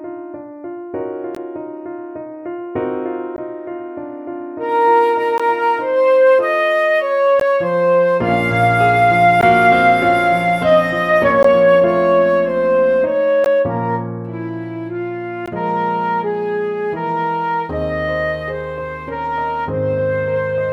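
Short gaps at a join of encoded pieces occur at 1.35, 3.36, 5.38, 7.40, 9.41, 11.43, 13.44 and 15.46 s, every 2.0 s. Each is a 16 ms gap. Separately encoded pieces were joined untrimmed, leaving encoder delay and padding. The sound drops briefly, then resumes.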